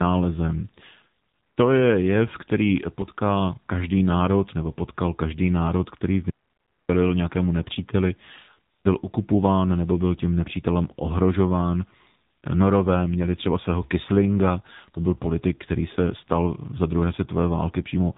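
Tandem speech coding runs throughout: two speech codecs in a row, the last sounding like narrowband AMR, stack their damage, leaving rough, muffled, warbly speech with nothing above 3.8 kHz.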